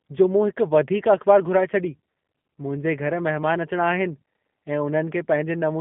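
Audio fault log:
throughout, G.729 codec: the speech went through a low-rate model coder, which fits G.729A at 8 kbit/s, rebuilt from filter, pitch and sparse pulses. Nothing passes above 3.8 kHz on a 150 Hz to 3.5 kHz line, so it sounds muffled and plainly rough and synthetic.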